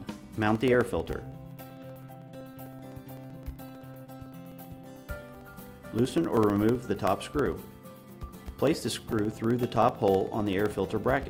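The audio carries periodic USB or driver dropouts from 0.10 s to 11.23 s. Every 64 ms, roughly a couple of milliseconds drops to silence, giving a steady ticking under the signal. That regular spacing points to a background task stalling the USB bus or audio driver.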